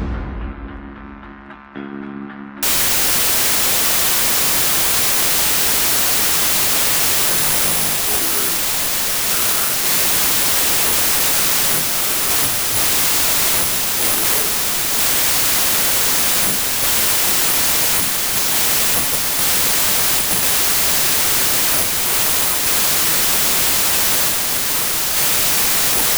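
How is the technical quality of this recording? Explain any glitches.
The recording is badly damaged from 2.63 s to the end.

Wrong sample width, from 2.63 s onward: audio stored as 32-bit integers is being read as packed 24-bit integers. Each group of three bytes becomes one value, so byte boundaries drift against the real samples. Only some values keep the true top bits, and the rest are scrambled. The result is loud noise with the original sound buried inside, running at 0.75 times normal speed with its pitch lowered.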